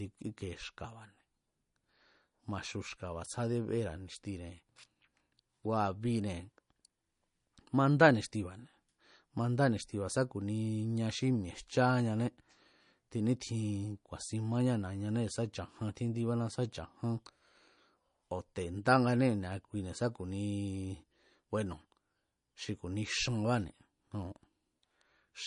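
Speech throughout the 25-second recording carries plainly audible damage, most likely from MP3 compression at a low bitrate, which fits roughly 40 kbps. Nothing is present above about 10.6 kHz, where the encoder has cut the treble to save bits. Weak frequency lines drop in and out from frame to frame, giving the sound a watery, swirling texture with metallic chirps on s sounds. Consonant attacks are smeared rather than crisp.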